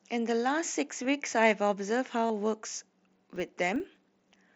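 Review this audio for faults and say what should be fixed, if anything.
You've got concealed Bluetooth headset packet loss in two spots: a short gap at 1.03 s, and a longer 37.5 ms run from 2.27 to 2.30 s where the receiver loops the last bit of waveform, so it buzzes briefly. Improving the radio link or cutting interference should help.

From 3.08 s to the end, there's a filter restarted on every block: each block begins from silence with a little transient, giving a 25 Hz buzz that rises and falls with the speech, which fits a 40 ms block. Keep the filter state between blocks to fix it.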